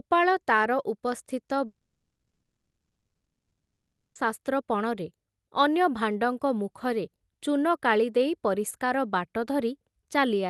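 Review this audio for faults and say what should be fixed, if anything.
From 1.65 to 4.17 s, a fading buzz trails into about 1.9 s of silence. Unlike a brief packet-loss click, 2.5 s is simply gone, likely a long network dropout. A more stable network connection, with redundancy such as forward error correction on the call stream, would prevent it.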